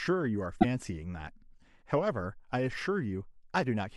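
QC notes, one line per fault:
0.56–0.65 s, damaged data in a compressed stream: a short glitch breaks into the speech for roughly 80 ms and then clears. Some of the encoded bytes at this point are corrupt, so the decoder cannot read those frames correctly, produces nonsense output or drops them, loses its place in the stream and has to hunt for the next valid frame header before normal decoding resumes.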